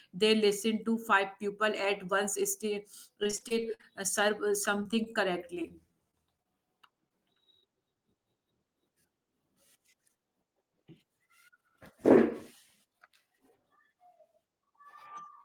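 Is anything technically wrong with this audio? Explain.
Yes. The speech breaks up twice into choppy, robotic stretches: first from 3.23 to 3.85 s, just before "uh serve uh", and again from 4.83 to 6.47 s, right after it. This is repeated packet loss. Each stretch has nine gaps where audio arrived too late or not at all. The receiver papered over each hole by extending the previous sound, but the next hole arrived soon after, so the voice turns choppy and stuttering, with fragments missing. The first burst is the harsher one. About a third of that span is patched, and its longest gap is 53 ms. The second burst is longer but thinner, with about 9% patched and gaps no longer than 24 ms.

Shortly afterwards there are two brief blips, at 7.09 to 7.12 s and 7.60 to 7.64 s, each heard as a tiny smear or wobble in the speech. These are short concealed packet losses, each about 20 ms of missing audio. 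The decoder filled each hole by carrying the preceding sound forward, continuing its pitch if it was voiced or using shaped noise if not, then crossfaded back into the real signal.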